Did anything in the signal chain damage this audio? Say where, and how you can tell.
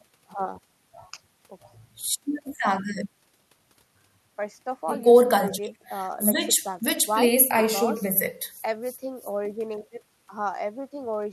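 No, nothing along the chain seems to have damaged this speech recording, and there's no sign of trouble at any stage you could point to.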